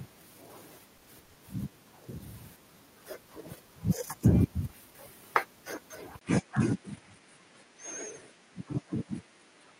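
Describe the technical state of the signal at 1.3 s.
From 1.25 to 1.38 s the speech stalls into a fading buzz, a call audio freeze, likely from delayed packets draining the jitter buffer; speech resumes about 100 ms late, nothing lost.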